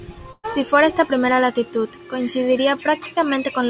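At 0.32 s a burst of packet loss hides about 120 ms: the last sound is held and fades until 0.45 s, ending in about 40 ms of silence, unlike a plain dropout's abrupt hole.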